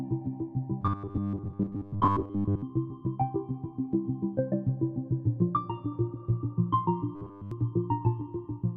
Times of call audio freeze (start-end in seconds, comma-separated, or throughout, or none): none